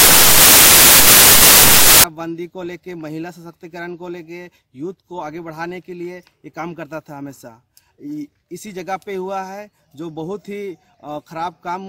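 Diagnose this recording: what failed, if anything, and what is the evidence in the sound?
The failure is in sample-format conversion: samples built from the wrong bytes. From 0.0 to 2.04 s the sound is buried under loud, harsh broadband noise. The bytes of each sample were joined in the wrong order or alignment. The rapidly changing low bits became the dominant part of each value.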